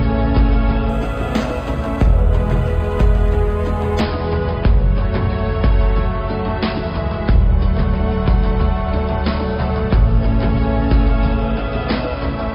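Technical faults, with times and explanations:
0.89–4.00 s, imaging from linear upsampling: the top of the band below 5.5 kHz is dulled, with a faint mirrored copy between 5.5 and 11 kHz around 40 dB down, giving a light metallic shimmer. This fits straight-line interpolation from 11 kHz to 44.1 kHz; a spectrogram shows a reflected band above 5.5 kHz.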